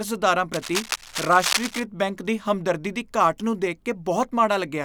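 From 0.53 to 1.86 s, just before "ਬੈਂਕ ਦੀ ਹਮਦਰਦੀ ਦੀ", dense, uneven scratching sits only a few decibels below the speech. This is cable scratch noise, likely from a worn cable or connector being moved. Unlike steady hiss or regular crackle, its bursts are irregular, then stop.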